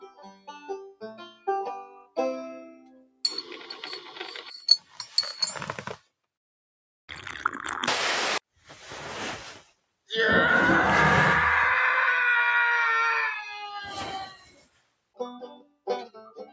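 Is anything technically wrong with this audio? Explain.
Yes. A noise suppressor applied to music or sounds runs through the whole clip. The speech-tuned processor treats sustained and ambient content as noise and attenuates it, with the gain swinging by around 10 dB. Attacks pass while held material and tails sink, so the level pumps and thins.

Sound cut by the noise suppressor occurs at 0.0–4.13 s, 4.79–4.99 s, 5.97–6.25 s, 8.54–8.70 s, 9.59–10.1 s and from 14.26 s to the end. Steady or decaying passages drop by up to about 20 dB (about 11 dB at 4.79 s, about 15 dB at 8.54 s), so decays are cut short. The call's microphone path also leaves nothing above 8 kHz, which is expected for that processing.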